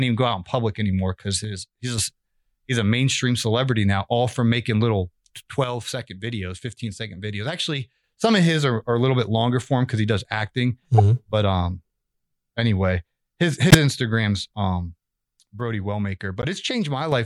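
Speech recording with two recurring faults. The level drops abruptly by about 6 dB at 1.44–1.98 s (after "in public anymore because", recovering at "a he's a mainstream"), at 5.64–8.04 s (after "all from making little", until "some of his are"), and again at 15.60–17.12 s. This is one channel drops out, likely one stereo side going silent so that the mono sum loses half the shared signal. Short bursts of misplaced spectral energy, heard as chirps or blips, occur at 10.98–11.00 s (right after "because he does acting", roughly -5 dBFS), at 13.70–13.75 s (the loudest of the three), and at 16.42–16.45 s (quieter, inside the last dropout). These are corrupt frame decoded errors: damaged compressed frames played with wrong gains or codes, each spanning roughly one or two frame lengths.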